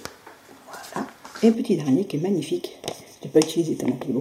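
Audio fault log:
1.55–4.21 s, channel delay (comb filtering): one channel lags by a fraction of a millisecond, so summing cuts evenly spaced notches from about 1.5 kHz up. The result sounds hollow and phasey.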